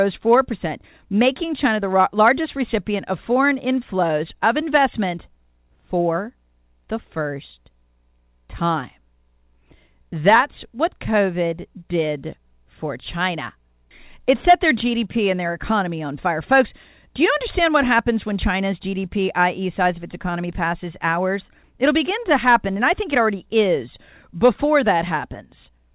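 No technical faults can be heard in the speech. It comes through a call path working as intended, with nothing above 4 kHz, which points to narrowband G.711 mu-law coding.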